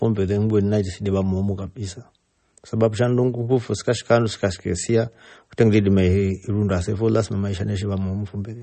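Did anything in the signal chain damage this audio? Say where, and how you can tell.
Yes, at the codec stage, throughout the speech: nothing remains above 8.4 kHz, and sibilants turn watery and swirly. This is likely MP3 compression, bit-starved in a way that fits about 32 kbps, cutting treble at a fixed frequency and flickering weak spectral lines between frames.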